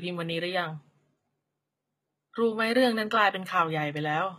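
A speech clip with plainly audible HE-AAC compression damage throughout, likely from a low-rate HE-AAC encode consistent with about 20 kbps. The treble is rebuilt by copying lower bands upward, so sibilants sound gritty and metallic, with nothing above 14.9 kHz.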